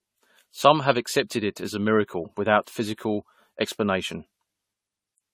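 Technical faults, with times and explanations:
Throughout: generation loss. The speech has a swirly, smeared, hollow quality beyond what a single lossy encode would leave, and consonant attacks are blurred. The likely cause is repeated decoding and re-encoding, around ten passes, in a chain that fits AAC-LC at about 64 kbit/s. Each pass quantises on a shifted frame grid, so its noise and spectral holes stack on the last. Nothing is present above 19.1 kHz.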